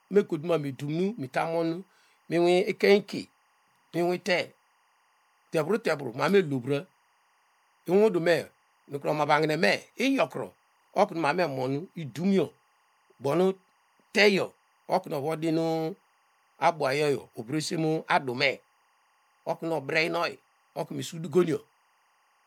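Timecode bleed runs through the whole speech clip. Linear timecode at 23.976 frames per second has leaked into the audio path. Its square wave flips between tones near 1 kHz and 2 kHz, an octave apart. It sits around 40 dB below the speech as a steady chirping warble.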